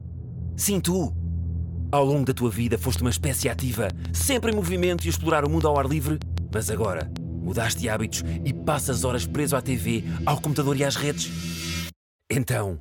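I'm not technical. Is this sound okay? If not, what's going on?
No. Likely interference from nearby equipment pulsed in, causing a train of clicks: about six even ticks a second from 2.96 to 7.17 seconds.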